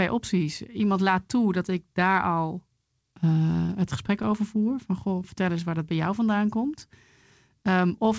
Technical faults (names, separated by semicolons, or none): scattered short gaps; jitter buffer slow-down; jitter buffer speed-up